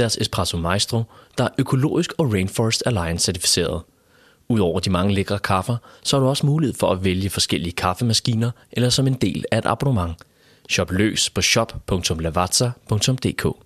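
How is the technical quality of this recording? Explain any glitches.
No technical glitches are audible anywhere in the recording.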